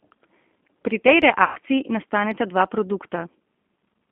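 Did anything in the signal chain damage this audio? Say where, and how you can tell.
Yes. At the codec stage, G.729 at 8 kbit/s runs throughout; the spectrogram shows nothing outside 200 Hz to 3.4 kHz, and the harmonics sound plainly rough and synthetic.

At the network stage, VoIP packet loss concealed by the speech codec spans 1.44 to 1.58 s. About 120 ms is missing, which fits six 20 ms packets. The decoder extrapolates from its last pitch and filter with the gain lowered frame by frame, so the gap is filled with a stretched sound that fades out.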